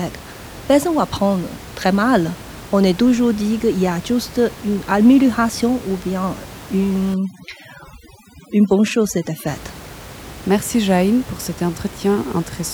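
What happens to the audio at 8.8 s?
At 8.8 s the clip is inside a stretch of overdone noise removal running from 7.14 to 9.47 s: bands near the estimated noise floor are pushed almost to nothing, taking quiet speech detail with them. Unlike a simple gate, the room noise, sitting about 18 dB below the speech, dissolves into twinkling specks.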